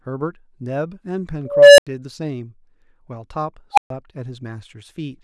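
At 1.45 s an unstable filter blows up: a tone around 500 Hz swells over 330 ms, clips, then drops into 85 ms of silence. It repeats at 3.73 s near 700 Hz, peaking within 46 ms before 128 ms of silence, as runaway feedback overflows and resets.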